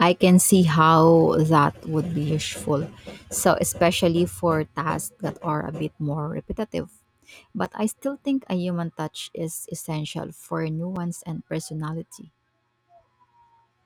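At 7.65 s the speech drops out for about 5.8 ms. This is a block of digital silence. The samples in that span were replaced by zeros, likely because the output buffer was not filled in time. The length fits a 256-sample buffer. The sound cuts to zero and back with no fade. The hole is too short to hear as a gap, so it comes across as a sharp tick. The same fault returns at 10.96 s, also about 5.8 ms long.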